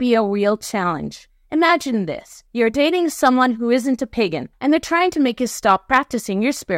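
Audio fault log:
3.24–3.44 s and 5.69–5.98 s, hard clipping: speech peaks after "this you're dating" and after "make you" overdrive a stage by about 2 dB, so waveform tops are sliced flat. The flattened crests generate high-order harmonics, heard as brief crackle on the loudest syllables.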